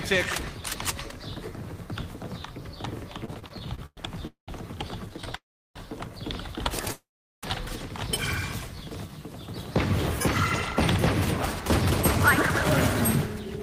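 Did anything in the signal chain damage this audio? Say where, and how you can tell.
Yes. Repeated stalls (stutter) at 3.25–3.99 s and 5.06–5.36 s make the sound drag in short hitches as late network packets repeatedly emptied the jitter buffer.

Call audio freezes at 4.27–4.50 s, 5.36–5.78 s and 6.92–7.45 s sustain the last sound, then fade to silence, likely because delayed packets drained the jitter buffer.

A jitter buffer slow-down at 8.67–9.12 s runs at 90% speed with unchanged pitch, stretched by 53 ms as the receiver repeated pitch periods to rebuild its reserve.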